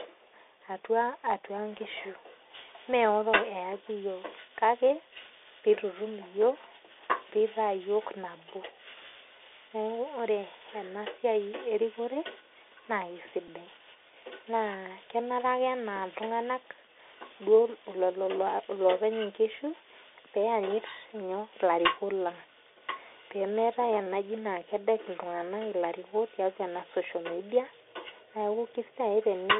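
From start to finish the speech carries the Bluetooth CVSD headset codec. The band runs only from 300 Hz to 3.6 kHz, so it sounds thin and boxed in. The damage is plainly audible. CVSD sends one bit per sample, saying only up or down, and its step size adapts. Fast, loud high sounds outrun that step and smear. S sounds turn scratchy. A granular hiss sits under the speech. The coarse grain fits a 64 kbps link.

At 13.48 s a Bluetooth headset packet is repeated. It is heard as a single small tick. The link dropped about 7.5 ms of audio, which fits two lost packets. The chip filled the gap by decoding the previous packet's bits again. That repeated fragment breaks the flow for an instant. Good packets return at once, so no steady buzz builds up.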